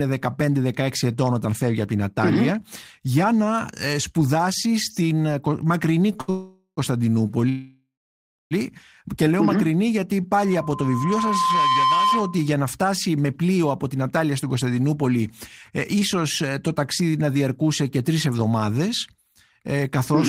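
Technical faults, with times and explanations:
6.17 s and 6.21 s, short stall from a late packet. Twice a packet was late and the jitter buffer ran dry. The last sound was stretched by 24 ms, then 69 ms, and held with a faint buzz. The speech then resumed where it stopped, with nothing lost.
6.30 to 6.79 s and 7.49 to 8.53 s, call audio freeze. Speech halts for 474 ms, then for 1016 ms. A fading buzz fills each gap, ending in near silence for about 70 ms and then 610 ms. Packets were likely held up in transit. Speech then resumes, with nothing missing.
10.45 to 12.48 s, loudspeaker feedback squeal. Just after "λεω μακρινή γιατί" a 1 kHz tone swells over about a second. It ends about 5 dB above the speech. A microphone is picking up its own loudspeaker, and at 1 kHz the loop gain exceeds one.
12.85 to 14.32 s, jitter buffer speed-up. Speech runs about 7% fast at unchanged pitch and sounds hurried. 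The buffer had built up extra audio after the delays. The receiver cut many short pitch-period pieces, about a tenth of a second in all, to reduce the lag.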